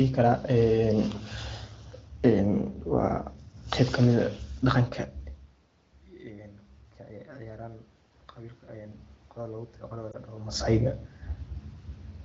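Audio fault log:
8.36–10.61 s, automatic gain rising: after the input level fell by about 18 dB, the gain control judged the signal too quiet and raised its gain slowly, by about 4 dB over two seconds, so the sound and the room noise behind it swell together.
10.12–10.16 s, lost AMR speech frame: a brief dip or warble that fits a single lost 20 ms frame. The wideband decoder filled the gap by repeating its last good settings at falling gain, then recovered with a moment of weak or rough sound.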